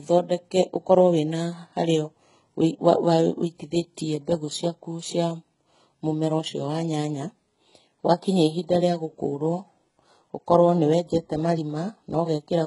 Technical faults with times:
0.00-12.66 HE-AAC compression

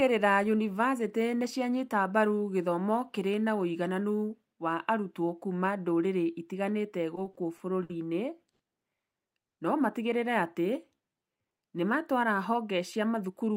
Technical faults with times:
7.15-7.91 repeated stalls (stutter)
8.51-8.61 short stall from a late packet
9.47-9.59 call audio freeze
10.42-11.43 jitter buffer slow-down

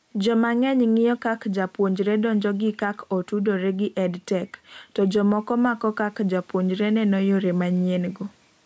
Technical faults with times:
0.00-8.66 gain pumping

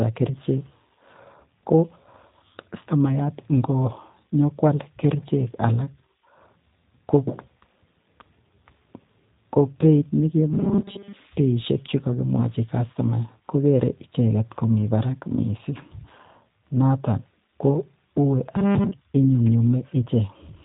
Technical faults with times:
0.00-20.65 G.729 codec
10.53-11.13 robotic sound from repeated short buffers

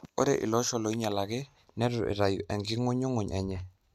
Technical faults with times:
none

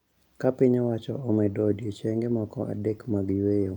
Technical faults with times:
none

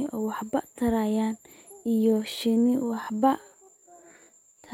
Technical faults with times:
1.74-4.73 time-stretched section

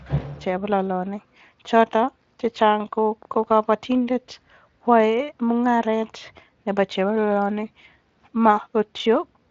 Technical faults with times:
2.72-3.76 train of clicks

